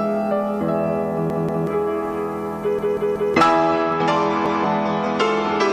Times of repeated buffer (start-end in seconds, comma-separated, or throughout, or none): 1.30-1.67, 2.79-3.34, 4.46-4.64